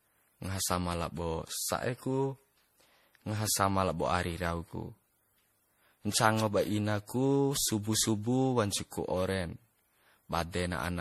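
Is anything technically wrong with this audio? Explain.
Yes, the speech has generation loss all the way through. It sounds swirly, hollow and smeared, with blurred consonant onsets. That's likely from being re-encoded around ten times with lossy MP3, which fits a 64 kbit/s setting, so quantisation noise and spectral holes accumulate with each pass.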